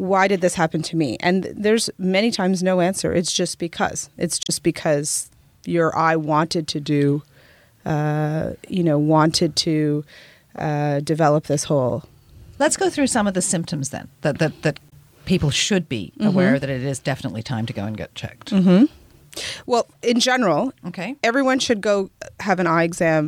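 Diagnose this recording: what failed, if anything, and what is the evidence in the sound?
Damaged data in a compressed stream, at the codec stage. Short glitches occur at 4.43 to 4.50 s, just before "because your eye wanted", and 14.89 to 14.93 s, between "then that that that" and "people should be". Corrupt frames made the decoder lose sync.

Two spans slow by about 6% and drop 107 cents, roughly a semitone. They run from 6.83 to 7.38 s and from 17.97 to 18.82 s, after "time to go and". This is likely a drift correction step at the buffer stage, resampling to rebalance two clocks.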